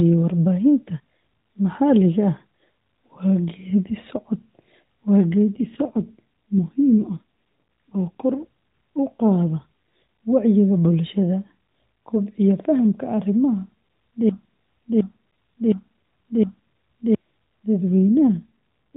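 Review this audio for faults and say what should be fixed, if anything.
AMR rate drop at 5.58–7.20 s and again at 17.91–18.95 s: the speech turns rougher and buzzier, consistent with a weak-link fall from 12.2 to roughly 5.9 kb/s. The spectrogram keeps the same 4 kHz ceiling, with grainier, smeared harmonics and no gap.

Broken-record loop from 14.29 to 17.15 s: a 0.71 s fragment repeats exactly four times back to back, likely from a stalled player or stream. The waveform shows an identical block tiled end to end, and the audio for that span is missing.

To prevent these, keep the radio link strong enough to hold the 12.2 kb/s mode, and have the player or stream output silence on a stall instead of replaying its last buffer.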